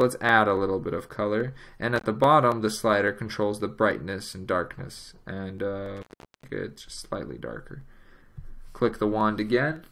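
The audio has an intermittent contact fault, like a loose plug or cable. The sound cuts out with edge crackle at 1.98 s (about 43 ms) and 5.97 s (about 0.41 s).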